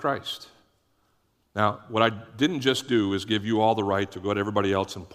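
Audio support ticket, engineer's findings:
No audible faults found on listening; no component implicated, no action required.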